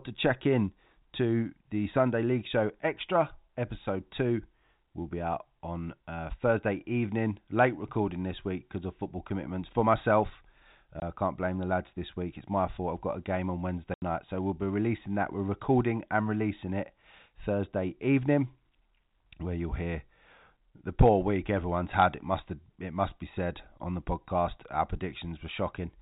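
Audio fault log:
11.00–11.02 s and 13.94–14.02 s, packet loss filled with silence: packets were dropped and the receiver substituted silence. This leaves a 20 ms gap after "football commitments for myself" and an 80 ms gap after "got a game on", which fits one and four 20 ms packets. Both gaps have hard edges.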